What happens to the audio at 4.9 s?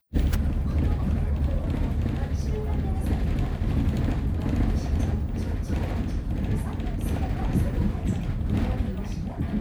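Nothing goes wrong at 4.9 s: the sound passes through that moment intact, with no dropout, click, distortion or other audible fault.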